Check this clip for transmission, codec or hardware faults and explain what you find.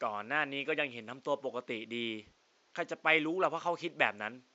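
No transmission, codec or hardware faults are audible.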